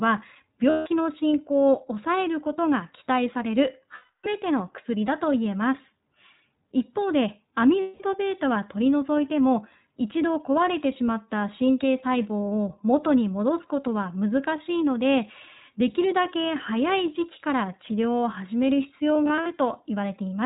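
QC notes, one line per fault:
throughout, iLBC codec: The speech is band-limited, with nothing above 4 kHz, and has a plainly audible rough, slightly synthetic edge. The narrowband codec codes each frame's excitation on its own at a low rate, consistent with iLBC's 15.2 kbps mode and 20 ms frames.
0.70–0.87 s, 3.96–4.27 s, 7.80–8.02 s, 19.14–19.48 s, lost iLBC frames: These gaps of 160, 280 and 200 ms are filled by a held, faintly buzzy or breathy vowel, longest at 3.96 s, where it also fades. The decoder repeats the last pitch cycle mixed with noise. The final instance is scattered short dropouts of a few tens of milliseconds. Because frames decode independently, the voice is right again almost at once.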